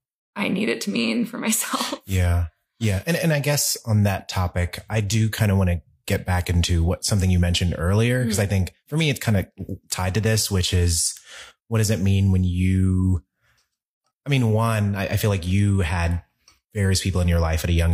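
No technical faults are audible.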